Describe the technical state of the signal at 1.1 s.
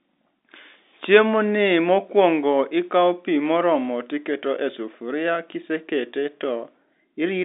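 At 1.1 s the speech is intact, with no dropout, click or distortion, only the narrow telephone band of normal G.711 coding, which cuts everything above about 3.7 kHz.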